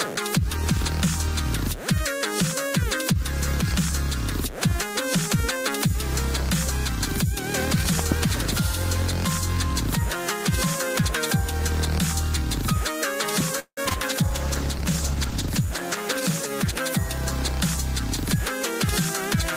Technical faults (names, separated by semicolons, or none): loud pop; repeated packet loss (robotic sound); call bitrate drop